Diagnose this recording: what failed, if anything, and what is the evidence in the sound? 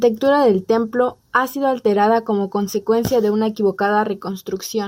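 Nothing in the recording stood out on listening, so there is no failed stage to point to and no audible evidence of a fault.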